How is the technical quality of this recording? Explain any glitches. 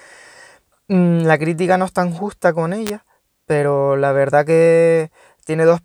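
One glitch stands out in the speech. From 2.87 to 2.90 s, between "es tan justa con" and "pero la verdad", an electrical switching spike, likely a nearby switch or discharge arcing into the audio line, adds a sharp snap.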